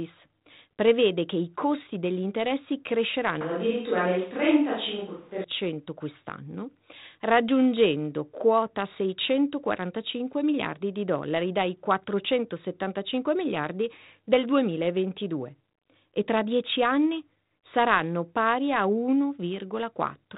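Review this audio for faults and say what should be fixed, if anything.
From 3.41 to 5.44 s, after "i costi degli interessi" and until "quest'anno raggiungendo quota", the speech turns abruptly roomy and hollow with thinner bass, likely a switch to a distant microphone after the close one dropped out. Room noise rises to roughly 35 dB below the speech while the level barely moves. Added reverb would not bring this sudden noise-floor jump and tonal change on a hard cut in and out. The 4 kHz telephone band from the G.726 coding stays the same across the section. To prevent it, check the close microphone's connection and battery before recording, and monitor its feed during the take.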